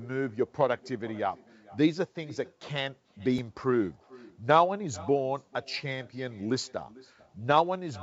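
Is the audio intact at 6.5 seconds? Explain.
No. At 6.5 s, like the rest of the speech, there's an echo with no canceller: the far end's loudspeaker leaks into its mic and nothing strips it out, so a faint, thin copy about 24 dB down trails each phrase by roughly 0.4 s.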